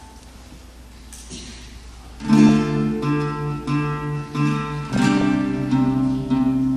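Throughout, the sound is dull and gurgling, with upper bands flickering out. That steady granular texture is likely MP2 compression, fitting about 80 kbps. At 0.40 to 0.55 s, 2.49 s and 4.89 to 5.22 s, DAB burbling adds brief blips of noise as reception bit errors corrupt single sub-bands. These bursts come and go, unlike the constant dullness.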